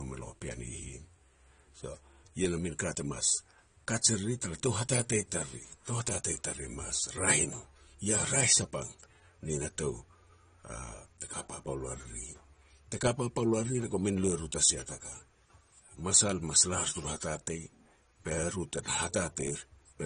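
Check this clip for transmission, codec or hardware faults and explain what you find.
One codec fault runs through the whole recording: low-bitrate audio saved at a high bitrate. From start to finish the speech has nothing above about 9.7 kHz, and that band limit is likely left over from an earlier low-rate encode, which fits AAC at around 32 kbit/s, later re-saved as high-rate MP3, around 320 kbit/s. The second encode cannot restore the missing treble, so sibilants sound dull despite the generous file size.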